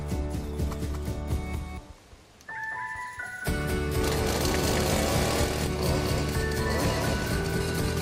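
A doubled audio track runs through the whole clip: every sound is followed by a second, full-band copy about a fifth of a second later, only a few decibels quieter. The copy carries no decay or room colouring, so it reads as a hard, flat repeat, not an echo. The likely cause is the same audio being captured twice, once through a slower path, so both versions end up mixed together at a fixed offset.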